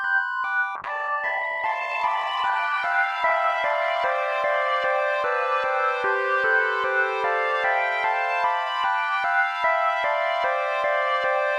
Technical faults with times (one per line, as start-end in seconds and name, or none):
0.77-7.21 call bitrate drop